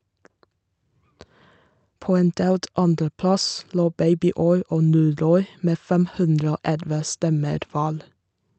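Nothing here stands out as a technical problem; the speech comes through steady and intact from beginning to end.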